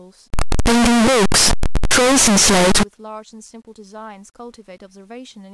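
From 0.34 to 2.83 s the speech is loud, harsh distortion, quiet moments equally loud: likely signed and unsigned mixed up, flipping the top bit.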